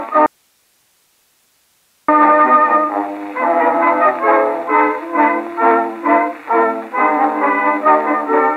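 From 0.26 to 2.08 s the music cuts abruptly to hiss about 45 dB down, an audio dropout to a faint residue, likely a lost feed.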